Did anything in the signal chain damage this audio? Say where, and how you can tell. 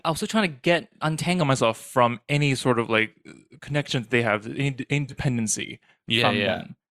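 Yes. Wrong sample rate at playback, 1.41 to 6.18 s: the speech slows to 0.919 speed and drops 1.5 semitones, consistent with 48 kHz audio played unconverted at 44.1 kHz.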